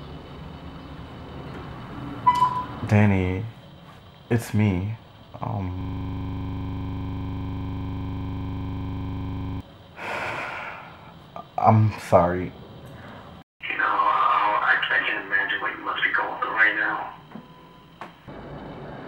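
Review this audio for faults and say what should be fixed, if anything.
The system froze between 5.81 and 9.61 s while the audio hardware kept replaying its ring buffer, a system hang loop. The same 40 ms slice repeats about 95 times, which produces a steady buzz at 25 Hz. A watchdog that mutes output when the buffer stops being refilled would prevent it.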